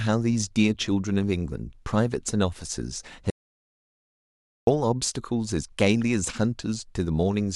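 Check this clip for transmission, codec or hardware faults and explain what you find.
There's one fault: an audio dropout to silence from 3.30 to 4.67 s. The speech cuts off mid-flow into dead silence with no room tone, then resumes abruptly, losing about 1.37 s. The input feed likely dropped briefly while recording carried on writing zeros.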